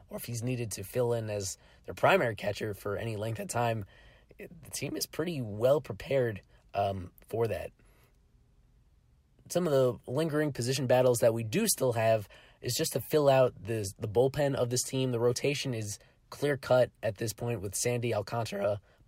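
A speech recording with no technical faults to report. Nothing in it calls for a time or a cause.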